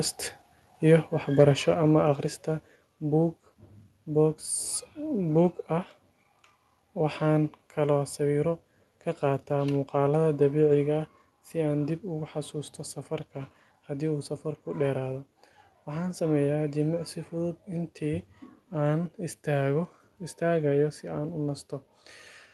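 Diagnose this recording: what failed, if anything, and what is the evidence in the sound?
Likely microphone overload at the converter: input gain sat about 2 dB too hot, so peaks flatten from 1.39 to 1.44 s, adding a harsh crackle.

Microphone volume stepped down, likely by call-processing gain control, at 1.74 s (about 4 dB) and 2.76 s (about 3 dB). Speech and background drop abruptly.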